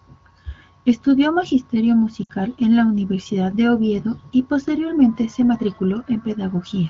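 Speech over an AMR wideband (HD Voice) link has lost AMR speech frames from 2.24 to 2.31 s, just before "en la". For about 60 ms, which fits three 20 ms frames, the decoder repeats its last good settings with falling gain, so the sound smears and fades. On a waveform the envelope decays there, and a spectrogram shows frozen, blurred harmonics before speech resumes.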